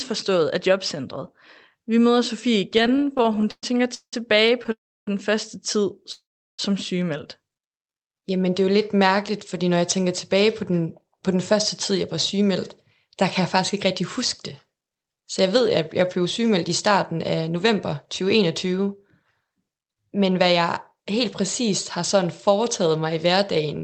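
From 2.77 to 4.14 s there are repeated stalls (stutter). Late packets left the jitter buffer empty again and again. The receiver stretched the last sound to fill each wait, about 470 ms in all and up to 180 ms at a time. Nothing is lost. The speech drags and stutters for roughly a third of that span, then resumes at "på den første tid".

Two call audio freezes follow, at 4.72 to 5.08 s and 6.12 to 6.60 s. Each brief buzz or hiss fades into silence, about 310 and 380 ms of it. Speech then carries on where it stopped. The likely cause is packets held up in transit while the buffer ran dry.

From 7.71 to 8.51 s comes a jitter buffer slow-down. The buffer was running low or had just raised its target delay. Repeated pitch periods added about 79 ms. The speech plays at 91 percent speed with unchanged pitch, so sounds seem drawn out.

Jitter buffer speed-up follows. It runs from 9.81 to 11.52 s, right after "lidt mærkeligt fordi når", and again from 11.92 to 22.15 s, ending before "foretaget mig i". 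The buffer held too much audio. Short pitch-period pieces were cut, about a tenth of a second, then about half a second. The speech runs 6 percent fast at the same pitch and sounds hurried.

Throughout, the sound passes through an Opus call path. Nothing is heard above 8 kHz, and the coding noise fits a bitrate near 32 kbps.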